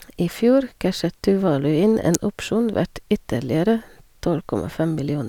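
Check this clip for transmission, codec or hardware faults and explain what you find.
One hardware fault stands out in this speech clip. At 2.14 s a sharp snap cuts in, peaking close to full scale: an electrical switching spike, likely a nearby switch arcing briefly onto the audio line.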